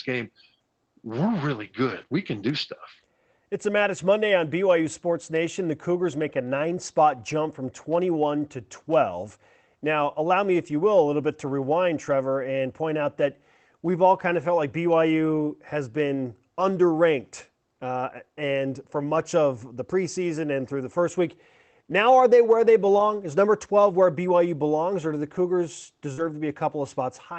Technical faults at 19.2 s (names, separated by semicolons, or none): lost packet rebuilt from error correction